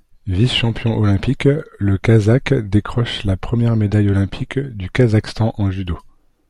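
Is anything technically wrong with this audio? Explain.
Yes. At 3.01 s, just before "la première médaille olympique", there is a single sharp click in the speech. This is likely dropped samples. About one sample is missing, so the waveform jumps abruptly to a later value. Nothing audible is lost. The jump alone produces the click.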